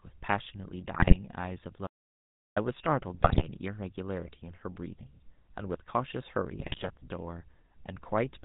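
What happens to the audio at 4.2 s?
At 4.2 s the speech carries the GSM full-rate codec, which runs through the whole clip rather than starting at that moment. This early mobile codec models the vocal tract and excites it with regularly spaced pulses, keeping only every third excitation sample, and the plainly audible buzzy, gravelly roughness fits its 13 kbps rate. On a spectrogram, energy stops at a flat ceiling near 4 kHz, and harmonics look smeared and grainy.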